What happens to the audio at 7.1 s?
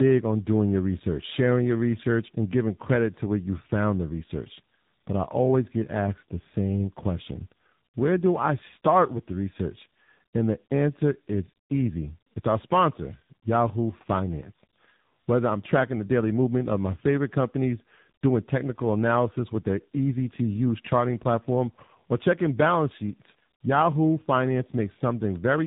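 At 7.1 s, as everywhere in this recording, the fault is tandem speech coding. The speech has passed through two low-rate speech coders in a row, with a decode and re-encode at the border between them. The character points to something like a 24 kbit/s ADPCM stage followed by 7.4 kbit/s AMR-NB. The second coder works on the first one's already damaged output, so the errors compound. The result is a rough, warbly, muffled sound with nothing above 3.8 kHz.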